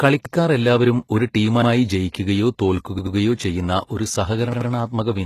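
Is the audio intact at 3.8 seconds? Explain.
No. At 3.8 s, as across the whole clip, the speech has heavy codec damage: synthetic-sounding treble with no content above 12.3 kHz. The likely cause is HE-AAC compression at a rate that fits 16 kbps, where spectral band replication rebuilds the treble from copied lower bands.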